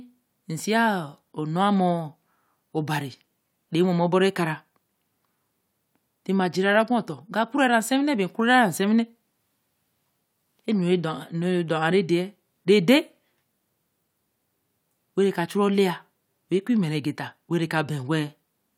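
Listening to the speech recording, nothing technical stood out at any point.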